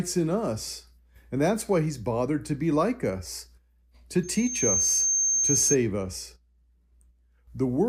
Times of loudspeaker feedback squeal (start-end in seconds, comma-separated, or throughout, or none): 4.23-5.77